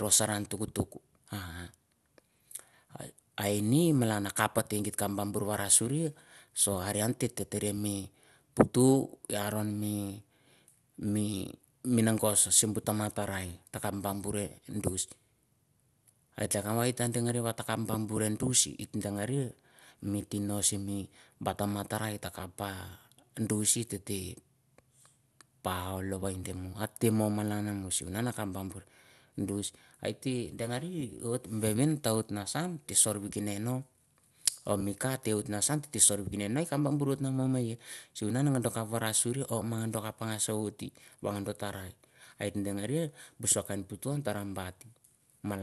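From start to finish the speech has likely been through MP2 compression at a starved rate, fitting roughly 80 kbps. Upper sub-bands are shut off, leaving nothing above 12.2 kHz, and coarse quantisation of the rest adds a plainly audible dull, gurgling, granular texture.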